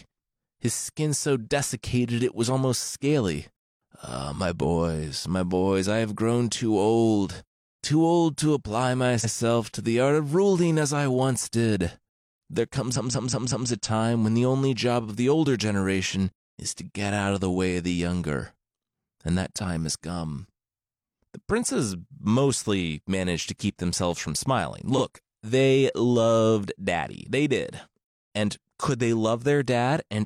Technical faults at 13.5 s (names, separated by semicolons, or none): repeated frames